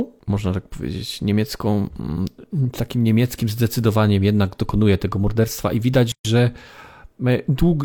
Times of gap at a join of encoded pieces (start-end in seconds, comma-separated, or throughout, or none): 6.12-6.25